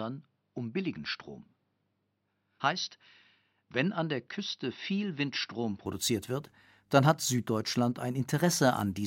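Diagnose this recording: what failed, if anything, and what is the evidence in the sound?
Input switched to a poorer device, likely at the driver's device selection, until 5.86 s, just before "wird dann hat". Until then the speech has nothing above 5.9 kHz, sounds duller, sits about 5 dB lower, and carries a faint extra noise floor. It then opens up with no gap.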